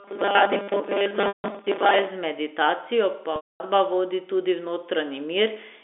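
A speech recording carries two separate technical faults. From 0.01 s to 2.08 s the speech becomes robotic sound from repeated short buffers: a rigid, metallic buzz fixed at 200 Hz that tracks the syllables only loosely. The likely cause is audio arriving too slowly, so the software keeps replaying a fragment of about 5 ms while most of the real signal in that stretch is dropped. Because the buzz pitch stays constant rather than following the talker, it is distinct from natural voicing.

Two gaps show packet loss with pitch repetition, one at 1.28 to 1.44 s (160 ms) and one at 3.36 to 3.60 s (240 ms). In each, the receiver holds the last pitch period, which sounds briefly sustained and buzzy, then fades it toward silence before the speech cross-fades back in. The gap lengths fit runs of eight and twelve 20 ms packets. These are short, discrete holds that die away, whereas the robotic fault is a continuous buzz lasting two seconds. 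Everything plays through a G.711 telephone channel limited to roughly 250 Hz to 3.6 kHz.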